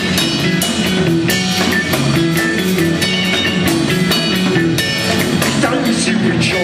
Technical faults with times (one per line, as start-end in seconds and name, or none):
none